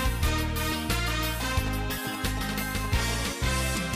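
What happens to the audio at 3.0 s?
At 3.0 s a galloping dit-dit-dit of short buzzes at about 217 Hz sits roughly 10 dB under the sound, running from 1.43 to 3.10 s. These are GSM signalling bursts: a nearby 2G phone's radio pulses, rectified by the audio circuitry.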